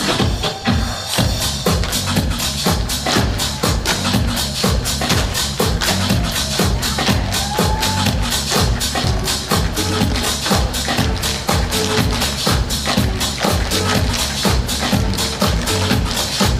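No technical faults are audible.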